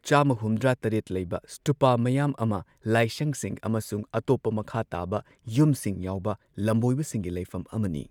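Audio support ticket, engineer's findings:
No fault found on listening; no dropouts, clicks, distortion or timing irregularities to attribute to any component in the signal chain.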